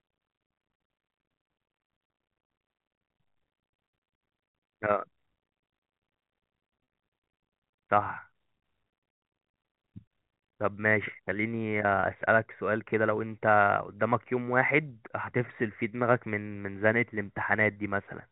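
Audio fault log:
6.84 to 6.87 s, 12.00 to 12.03 s and 17.73 to 17.76 s: packet loss with pitch repetition. Each gap lasts 30 ms, which fits a single lost packet. The receiver fills it by repeating the last pitch period of the speech. The result is a brief held, buzzy tone instead of a dropout. The gaps are too short for the fill to fade to silence. Through the telephone-band G.711 coding, each one registers as a small tonal stutter.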